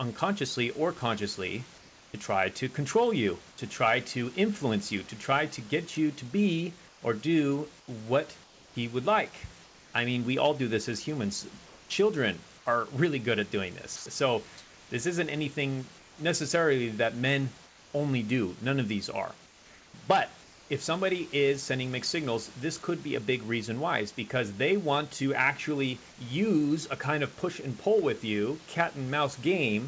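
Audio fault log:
1.78–2.14, 6.88–9.94, 11.66–12.66, 13.96–16.18, 17.66–17.94 and 19.46–20.70 s, comfort noise in place of the background: in pauses, for example after "get you to be" and after "really good at doing", the room's detailed background turns smooth and featureless, about 3 dB quieter at 1.78 and 17.66 s. The sender likely stopped transmitting in silence, so the receiver synthesized noise.
13.96–14.06 s, sound dropped by the voice detector: right after "really good at doing", about 50 ms of sound is missing and gives way to the same steady noise. The sender's voice detector likely judged the sound as background and cut transmission early.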